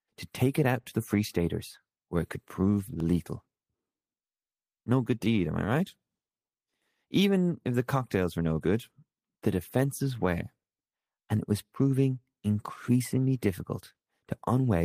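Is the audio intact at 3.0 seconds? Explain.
No. At 3.00 s there is a tick: a block of digital silence about 0.5 ms long. A tiny run of samples drops straight to silence and back with no fade, and a gap that short makes a tick rather than an audible gap.

The moment also falls inside the repeated timing corrections that run from 0.12 s to 14.62 s. The receiver keeps repeating short slices to stay in step, playing at about 98% speed and adding around 0.3 s overall.

Behind those corrections is clock drift between sender and receiver, present across the whole clip. The sender's clock runs roughly 2% slow, so the jitter buffer keeps draining and needs small, unevenly spaced fills, heard as faint hiccups in the timing.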